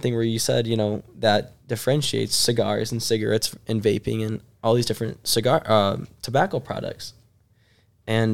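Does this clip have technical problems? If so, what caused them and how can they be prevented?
No, nothing in this speech recording points to a technical fault, so there is no cause to trace and nothing to prevent.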